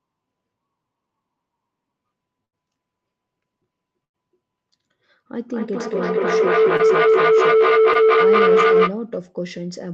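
At 2.45 to 2.55 s the speech stalls into a brief held, fading sound and then jumps ahead. This is a burst of packet loss. About 80 ms of audio never arrived, and the receiver stretched the last sound over roughly 72 ms while turning it down. A second burst at 4.05 to 4.19 s is longer. About 100 ms is missing, and there is a 90 ms fill plus about 9 ms of added time before the speech resumes further along.

From 5.48 s a low, ringing tone swells until it dominates, peaking about 12 dB above the speech. The howl continues until 9.03 s. This is feedback howl. Two devices in the same room fed each other's loudspeaker output back into their microphones, so each pass round the loop added level. The loop's resonance narrowed the sound to a pitch around 400 Hz, and its delay is roughly a fifth of a second.

Underneath the howl there are two tiny glitches, a smear at 6.77 to 6.81 s and a quick wobble at 7.93 to 7.97 s. 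Each is short concealed packet loss. About 20 ms of the call failed to reach the decoder in time. The receiver filled the gap with an extension of the preceding sound, lasting about 25 ms and 15 ms respectively, then blended back into the real audio. The high end of the whole clip stops at 8 kHz, which fits the Opus call path's bandwidth.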